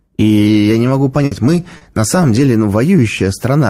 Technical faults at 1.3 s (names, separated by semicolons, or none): burst of packet loss